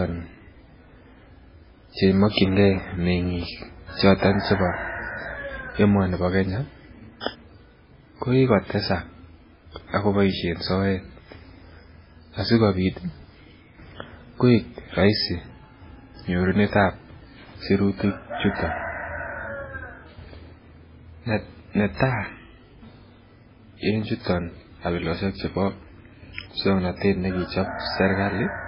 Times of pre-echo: 2.32-2.37, 7.20-7.26

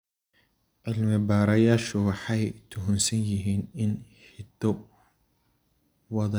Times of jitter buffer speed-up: none

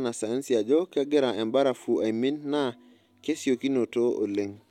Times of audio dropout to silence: none

